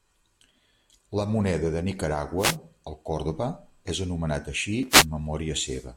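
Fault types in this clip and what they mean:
Wireless microphone noise hit: the FM link fades as reflections cancel, so receiver noise surges into a swish of static after "moneda de" and "és anomenat així".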